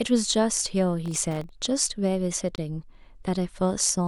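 From 1.06 to 1.49 s a gritty crackle tears through the speech: processor overload crackle, where around twenty tiny buffers under a millisecond long missed their deadlines and dropped to silence. At 2.56 s the sound cuts out for 23 ms and resumes, likely a Bluetooth stall while the headphone buffer waited for resent packets.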